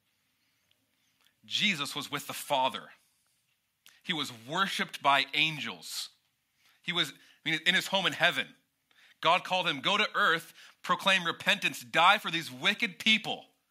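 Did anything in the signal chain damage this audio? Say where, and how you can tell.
No, nothing in the signal chain has left an audible mark on this speech recording. None of the stages, from capture and conversion through to storage and playback, shows damage that a careful listener can pick out.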